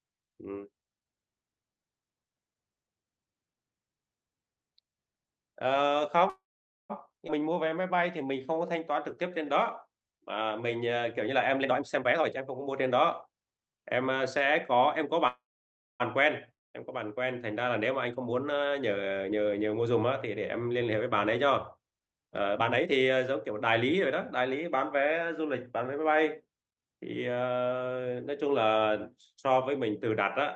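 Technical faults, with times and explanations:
6.29–6.92 s, call audio freeze: the sound stalls for about 0.6 s, a short fading buzz then about 0.5 s of silence, and resumes with nothing lost, likely packets held up and the jitter buffer running dry.
15.28–16.02 s, call audio freeze: same again, about 0.72 s this time with roughly 0.61 s of it silent, then it carries on from where it stopped.
7.28 s, skip ahead: playback jumps forward abruptly, roughly a fifth of a second of speech dropped and the two sides spliced almost directly together.
7.43–9.72 s, jitter buffer slow-down: speech runs at 89% speed, pitch unchanged, stretched by about 247 ms of repeated pitch periods, so sounds drag.
11.61–14.21 s and 18.12–25.55 s, jitter buffer speed-up: speech hurries along at 123% and then 110% speed, same pitch, as the buffer trims short pitch-period chunks, roughly 0.7 s gone each time.
16.54–16.75 s, long network dropout: a brief fading fill then near silence for about 190 ms, and speech comes back with about 200 ms missing, likely a run of packets that never arrived.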